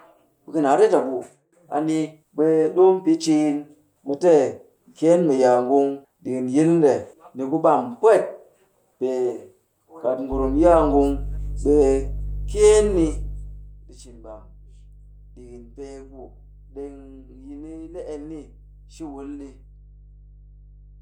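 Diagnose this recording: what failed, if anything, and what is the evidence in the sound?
A steady low drone at 50 Hz comes in at 10.32 s and stays to the end of the recording, fairly strong at roughly 10 dB below the speech, with some low harmonics above it. This is mains hum, and it points to the analogue wiring stage. A ground loop or a nearby transformer is coupling the power line into the signal path, and its sudden onset suggests a cable or piece of equipment was connected or moved at that moment.

From 13.22 to 13.82 s the speech drops by around 15 dB, and a fine ticking or zipping rides on the sound for as long as the level is moving. This is zipper noise from the gain stage in the driver or buffer processing. The level is changing in unsmoothed 1 dB jumps at about fifty steps a second, and each jump makes a small click.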